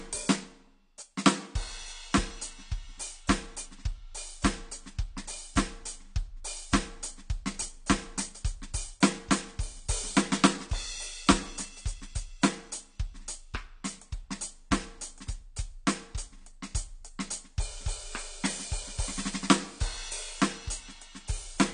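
AAC compression, throughout the music: nothing is heard above 9.6 kHz, and the plainly audible damage sounds dull and smeared, with a warbling, fizzy texture. This likely comes from an AAC-LC encoder starved of bits, pointing to roughly 32 kbps.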